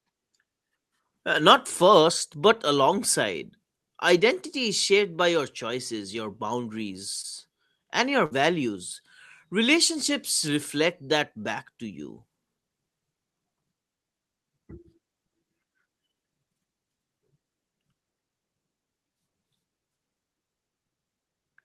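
At 7.21 to 7.25 s, short concealed packet loss: about 20 ms of the call arrived too late to decode, so the receiver extended the preceding sound for about 21 ms and blended back in, leaving a brief smear in the speech.

At 8.25 to 8.33 s, right after "and your", a burst of packet loss drops about 60 ms in a row. The decoder stretches the last sound for about 52 ms and fades it, giving a held, dying tail before speech resumes with a piece missing.

At 10.07 to 10.10 s, just before "reflect that back to", another short concealed packet loss covers a 20 ms hole with only about 12 ms of continued sound, heard as a quick wobble.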